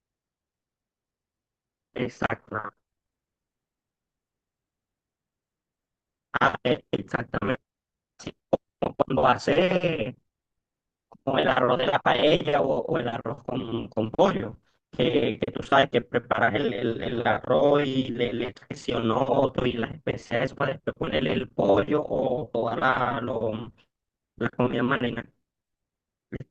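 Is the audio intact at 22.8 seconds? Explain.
Yes, at 22.8 seconds the speech plays through without any dropout, click, distortion or other audible fault.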